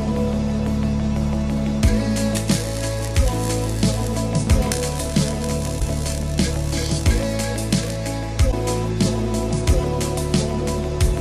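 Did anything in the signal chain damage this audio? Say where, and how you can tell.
Yes, at the codec or storage stage: damaged data in a compressed stream produces two brief faults, at 5.76–5.82 s and 8.48–8.53 s, each about 56 ms. Unlike a network dropout's silence or smooth concealment, the decoder misreads corrupted frames and emits a chirp, click or short hole before regaining sync.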